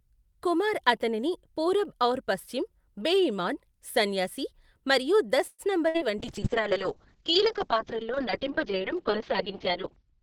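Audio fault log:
5.47 to 5.62 s, call audio freeze: The sound stops advancing for about 111 ms. The last sound is stretched into a fading buzz that ends in about 30 ms of silence, and then the audio picks up exactly where it halted. The likely cause is packets held up in transit that drained the jitter buffer, so the receiver had nothing new to play. Nothing is lost, but everything after this point now arrives about 111 ms later.
5.89 to 5.97 s, burst of packet loss: A run of packets went missing or arrived too late to use. The receiver covered the hole by extending the preceding sound for about 58 ms and fading it down, which produces a brief held buzz or hiss. When playback resumes, it skips ahead, and about 60 ms of the original audio is simply gone.
6.23 s to end, call bitrate drop: The bandwidth estimate collapsed and the encoder was told to go from 48 kbps down to 6 kbps. It stays at that floor for about 3.85 s. 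At such a low rate the coding becomes coarse, giving a rough, watery texture. The audio band also narrows from 20 kHz to 6 kHz, so everything above that is cut away and the sound turns muffled right through to the end.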